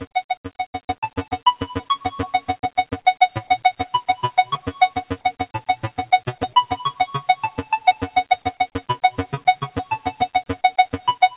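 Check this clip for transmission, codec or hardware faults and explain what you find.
The clip shows two related faults, both from a speech-oriented noise suppressor acting on non-speech sound. The audio tops out near 4 kHz, consistent with a 64 kbps G.711 mu-law call path working as designed.

Noise suppressor applied to music or sounds, throughout: the level pumps and thins, with sustained parts and decays sinking while onsets survive. A suppressor built for voice is treating steady content and tails as noise, swinging gain by around 15 dB.

Sound cut by the noise suppressor, at 0.04–0.96 s, 2.4–2.85 s, 4.53–4.69 s, 5.11–5.47 s, 6.28–6.48 s and 8.73–8.89 s: these passages drop noticeably below their surroundings, by about 11 to 16 dB, with held sound and tails clipped short. The suppressor misjudged them as noise and pushed them down hardest.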